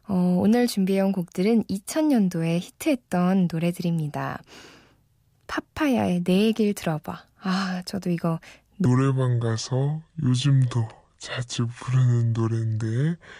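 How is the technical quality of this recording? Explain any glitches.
One glitch stands out. From 8.85 s to the end at 13.39 s, the speech plays as a section at the wrong speed, running at 0.673 times normal, likely because that stretch was clocked at the wrong rate. Pitch drops roughly seven semitones while pacing slows together, which separates it from a pure pitch shift or time-stretch, where only one changes.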